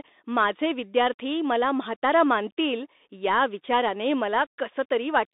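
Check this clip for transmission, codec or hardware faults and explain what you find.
The clip has one fault, present throughout: Bluetooth CVSD headset codec damage. Across the whole speech clip, the audio has passed through the narrowband headset codec. Each sample carries one up-or-down bit at what sounds like a 64 kbps stream, with an adapting step. Sound is confined to roughly 250 Hz to 3.7 kHz. Loud high-frequency content outruns the step and distorts, s sounds turn scratchy, and a granular hiss sits underneath.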